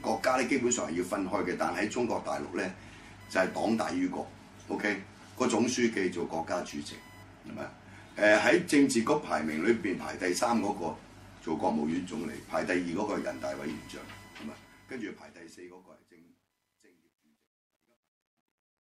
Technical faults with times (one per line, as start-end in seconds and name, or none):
0.00-18.88 computer activity noise
14.14-18.88 truncation distortion on a fade